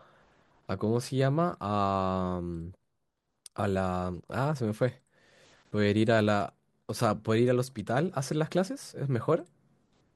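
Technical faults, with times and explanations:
No technical faults can be heard in this speech clip. There is nothing here that needs a time or an explanation.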